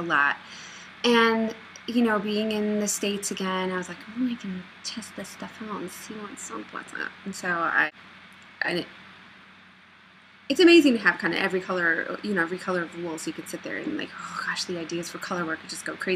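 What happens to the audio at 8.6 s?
Nothing goes wrong at 8.6 s; the audio plays through that moment intact, with no dropout, click or distortion.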